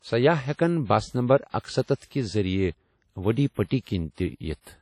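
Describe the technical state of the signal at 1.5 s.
At 1.5 s, as across the whole clip, the speech carries the artefacts of an earlier low-bitrate encode, with nothing above about 17.3 kHz. This is likely low-bitrate audio saved at a high bitrate: the damage points to an early low-rate encode, and re-saving as high-rate MP3 cannot restore what was removed.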